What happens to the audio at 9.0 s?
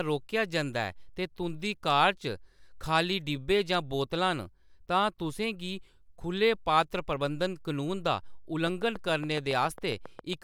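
At 9.0 s the speech is inside a train of clicks that runs from 8.67 to 10.34 s, starting just after "पात्र प्रबंधन कनून दा". Roughly fifteen near-identical pulses tick at a steady 7.2 per second, peaking about 5 dB above the speech and carrying on through pauses. That regular, same-shaped ticking sets it apart from random crackle or a single dropout pop. The likely source is interference from nearby equipment or a faulty connection or power supply.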